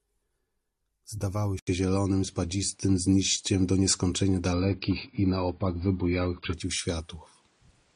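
Speech recording with two separate quality changes. At 1.59 s the sound breaks for about 80 ms, then continues through to the end with nothing above 9.8 kHz, a level shift of around 5 dB, and a new background noise floor sitting roughly 40 dB below the speech. This is most likely an input switched to a poorer device: the recording chain moved to a different microphone or headset path with a narrower band, its own gain and its own noise. From 4.53 s to 6.53 s the treble collapses further, with nothing above 5 kHz and a sharp rise in codec artefacts. The change is abrupt in both directions and leaves no gap. This is an adaptive stream at a lower bitrate. The connection forced a switch to a much lower-rate AAC version, which points to something near 16 kbit/s against a normal rate around 96 kbit/s, before the player stepped back up.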